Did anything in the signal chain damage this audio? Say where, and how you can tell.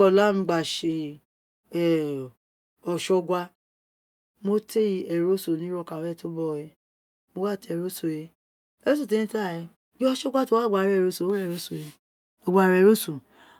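No, nothing damaged this audio.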